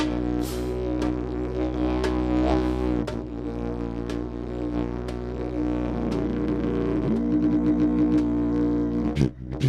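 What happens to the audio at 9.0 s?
Nothing goes wrong at 9.0 s; the audio plays through that moment intact, with no dropout, click or distortion.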